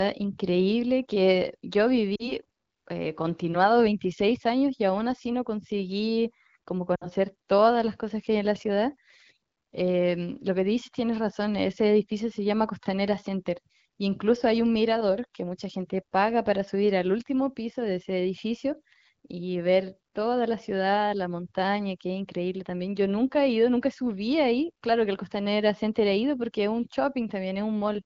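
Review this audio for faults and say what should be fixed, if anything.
Lost AMR speech frames at 2.15 to 2.33 s and 6.95 to 7.08 s: the decoder stretches the last good sound while fading it, then recovers roughly. The gaps sound like about 40 ms and 60 ms, which fits two and three dropped frames. Improving radio coverage or link margin so frames arrive with valid checksums would prevent this.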